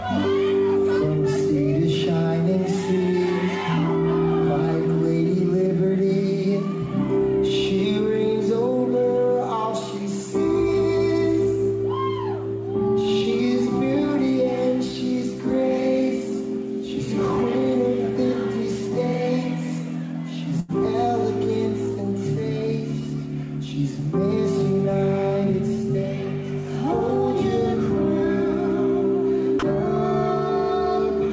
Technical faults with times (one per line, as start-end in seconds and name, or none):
20.60-20.71 burst of packet loss
29.59-29.62 sound dropped by the voice detector